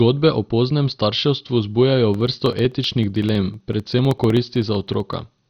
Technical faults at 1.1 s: MP2 compression

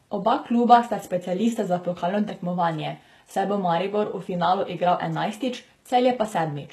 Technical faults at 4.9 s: HE-AAC compression

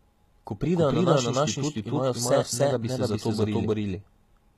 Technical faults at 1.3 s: doubled audio track; HE-AAC compression

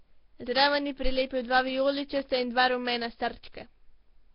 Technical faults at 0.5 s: Nellymoser compression

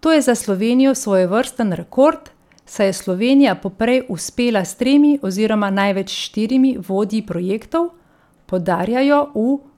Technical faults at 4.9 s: CD scratch ticks

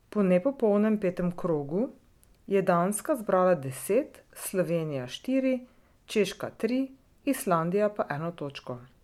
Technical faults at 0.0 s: none

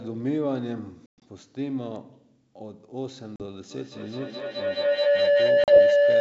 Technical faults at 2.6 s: none

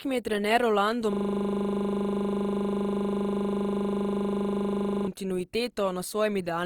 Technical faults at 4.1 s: Opus compression; system hang loop

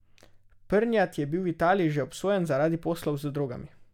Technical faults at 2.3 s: none

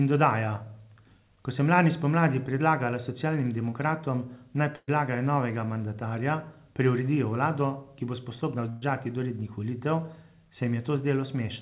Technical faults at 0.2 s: none

